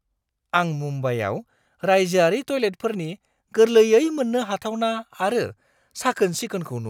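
No technical faults are audible.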